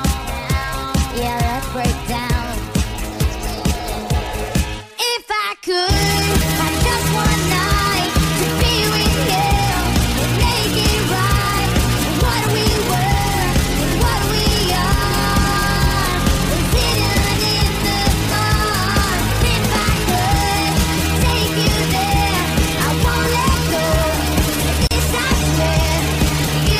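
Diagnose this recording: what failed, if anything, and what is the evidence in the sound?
A gap at a join of encoded pieces, at the codec stage. Continuous sound drops out from 24.87 to 24.91 s, a silence of about 37 ms with smeared edges. The pieces were encoded separately and joined untrimmed, keeping the encoder's start delay and final-frame padding.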